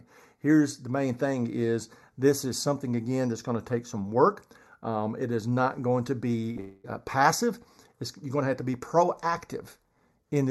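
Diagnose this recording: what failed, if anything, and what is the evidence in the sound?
The speech sounds hollow and slightly phasey throughout, with a fixed notch around 3 kHz. This is channel delay (comb filtering) at the wiring or driver stage: one channel lags by a fraction of a millisecond, and summing to mono cancels evenly spaced frequencies.

Right after "is not going to", from 6.51 to 6.58 s, a sound is held too long with a slight buzz or dip. This is a short stall from a late packet on the network. The jitter buffer ran empty, and about 43 ms of stretched sound filled the wait.

From 6.60 to 6.86 s, the audio hangs as a fading buzz or hiss for about a quarter second, then resumes where it stopped with nothing lost. This is a call audio freeze, likely caused by packets held up in the network while the jitter buffer ran dry.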